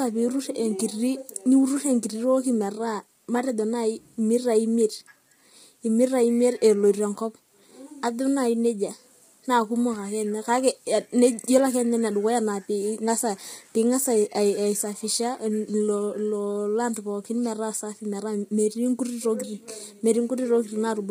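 Throughout, the speech sounds rough and grainy, likely from low-delay AAC compression near 24 kbps. A spectrogram shows smeared harmonics, noise filling the gaps between them, and a lowered or synthetic-looking top band.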